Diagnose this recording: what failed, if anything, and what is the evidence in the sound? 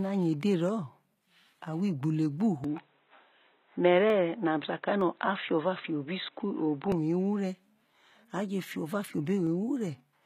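Codec stage: throughout the speech, sibilants sound gritty and metallic and the top end sounds synthetic. This is likely HE-AAC compression at a low bitrate around 20 kbps, where spectral band replication rebuilds the treble from copied lower bands rather than coding it.

Capture stage: from 2.64 s to 6.92 s the speech turns dull and boxy, with a level shift of a few dB and a new noise floor far below the signal. It returns without any gap. This likely reflects the input switched to a poorer device and then back.

Driver or buffer stage: single sharp clicks appear at 2.78 s, 4.10 s, 5.01 s and 9.47 s, each a thin vertical line across the spectrum. These are likely dropped samples. Each loss is only a fraction of a millisecond, so the waveform jumps abruptly to a later value.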